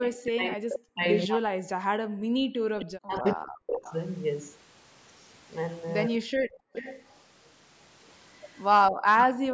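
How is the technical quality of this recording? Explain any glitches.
The recording has three recurring call-processing faults, all tied to both ends of a call being live at once. The audio carries nothing above 8 kHz, as expected from call microphone processing.

From 0.0 to 3.82 s, and again from 6.2 to 6.72 s, the talker's level repeatedly dips and breaks into pieces. The first stretch accumulates about two seconds of affected audio, the second a brief fraction of a second, with the deepest drops reaching around 40 dB. This is likely speech suppressed in double talk: with both sides speaking, the echo canceller couldn't tell its own talker from loudspeaker echo and attenuated everything it heard.

From 2.63 to 2.71 s the room sound collapses by about 36 dB, and from 8.91 to 9.07 s by about 38 dB. Each time it returns, leaving a momentary hole in the background. This is background gated by the echo canceller: while the loudspeaker played, the canceller clamped the microphone hard, then released it once it judged the echo had passed.

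Faint delayed copies of the voice trail behind the talker from 2.79 to 3.96 s, 6.73 to 7.13 s and 8.84 to 9.34 s. They lag by 260 ms and sit roughly 15 dB below the main speech. The likely cause is echo leak: a far end on loudspeaker whose echo canceller didn't fully remove what its microphone picked up, so a residue travelled back.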